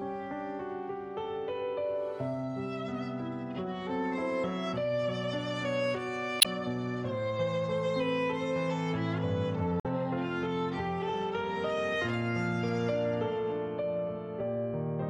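At 6.39 to 6.46 s and again at 9.79 to 9.86 s, damaged data in a compressed stream makes the decoder misread frames and hunt for sync, giving a short glitch of about 70 ms and 76 ms respectively. A spectrogram shows brief broadband smears; the waveform shows abrupt discontinuities.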